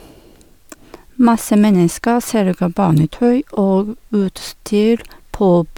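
No technical faults are audible in this recording.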